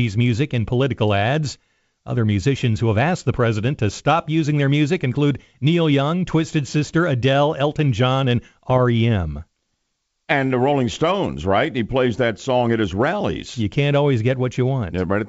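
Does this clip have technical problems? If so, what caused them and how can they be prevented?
Yes. Pops and rough bursts with brief level changes at 5.01 s and from 8.70 to 8.79 s are bit errors on an ADPCM link. At about 0.2 percent, flipped bits reach the G.722 decoder, upsetting its step size and predictor so each error rings on for milliseconds. Adding error protection and concealment to the link, or improving the radio or line quality, would prevent it.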